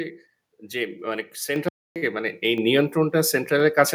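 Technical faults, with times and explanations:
1.56 s and 2.58 s, microphone volume stepped up: the level jumps in one step, by about 6 dB and then about 4 dB, with the sound and its background rising together. The call software judged the microphone too quiet and raised the device's input volume abruptly.
1.68–1.96 s, playback stall: the sound cuts out mid-flow into silence for about 274 ms, then resumes. The player likely ran short of data or had its output thread blocked, and nothing reached the output until it recovered.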